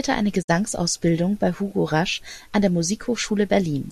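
From 0.41 to 0.50 s, a digital broadcast dropout: the receiver muted bad frames, so speech fades in 20 ms to silence, a flat waveform and blank spectrogram gap.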